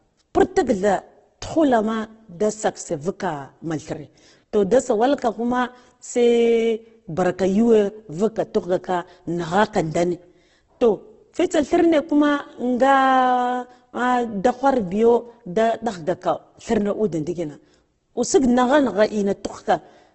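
Across the whole speech clip the sound is rough and grainy, with harmonics smeared into a noisy, hissy texture rather than left with gaps. The likely cause is heavy Opus compression in its music (CELT) mode, at a level that fits a rate around 12 kbps: short of bits, the encoder keeps each band's energy but fills it with noise or folded copies of lower bands. On a spectrogram, energy stops flat at 8.2 kHz, and bands below look speckled instead of cleanly striped.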